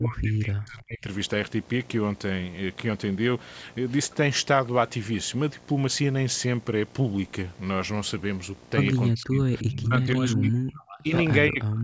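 Throughout the clip a video or display buzz sits under the speech: a 60 Hz field-rate buzz with hash above it, roughly 25 dB below the speech. A screen or video cable near the audio path is coupling its picture-rate interference into the signal.

From 0.0 to 1.08 s, 9.12 to 11.12 s and 11.49 s to the end, the speech is suppressed in double talk. The level dips and breaks up in pieces, dropping by roughly 35 to 40 dB at its deepest. This is likely an echo canceller pulling down the talker while the far side was also speaking.

Within that last stretch, from 11.6 to 11.64 s, a brief echo leak appears. It is a short scrap of the voice returning about 344 ms late at roughly 25 dB below the speech, likely residual loudspeaker pickup that the far end's canceller failed to remove.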